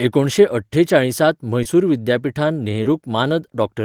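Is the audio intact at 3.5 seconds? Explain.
Yes, at 3.5 seconds the speech runs on intact, with no dropout, click, distortion or other fault to be heard at that moment.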